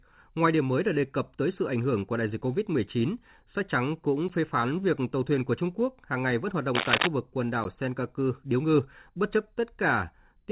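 At 4.28 s, just after "sách trắng cũng", a block of digital silence cuts the speech for about 12 ms, which fits a 512-sample buffer not being filled in time. The abrupt drop to zero and return are heard as a short tick. From 6.75 to 7.07 s, after "hàng ngày vẫn hoạt", cable scratch noise, likely from a worn connector or cable being moved, adds dense, irregular crackling roughly as loud as the speech. At 7.64 s, after "vực quần", the same 12 ms dropout ticks again, over speech already band-limited to 4 kHz by the G.711 call path.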